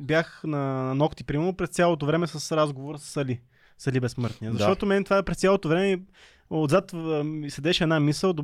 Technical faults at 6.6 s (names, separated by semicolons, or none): none